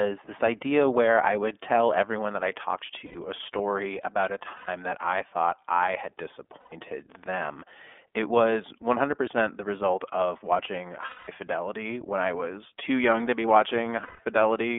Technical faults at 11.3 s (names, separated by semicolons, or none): iLBC codec; lost iLBC frames